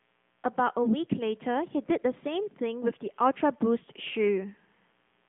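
AMR narrowband mobile codec, throughout: the speech passes through a roughly 150 Hz to 3.5 kHz line with nothing above 3.7 kHz, and its synthetic buzz fits a 10.2 kbps rate.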